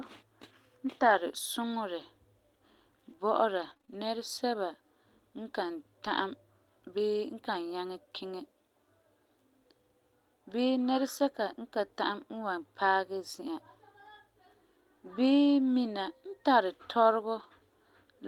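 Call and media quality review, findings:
Brief ticks and small smears in the speech, 1.01–7.55 s, about four separate dropouts, none longer than roughly 20 ms. Scattered short gaps: network packet loss or late arrival, 80 ms missing in total, receiver concealment extending preceding audio across 320 ms.

Short rough, noisier patch with no audible dropout, 17.39–17.45 s, 40 ms long. Lost packet rebuilt from error correction: Opus in-band FEC, consistent with two lost packets replaced by the lower-bitrate redundant copies carried in following packets.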